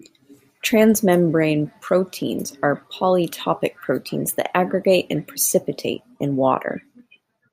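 Two device clocks likely running roughly 200 ppm apart let the buffer drift until about fifteen samples are dropped or repeated. These clock drift buffer slips recur every 1.88 s, about four times from 0.34 to 5.99 s, each a brief click in the speech.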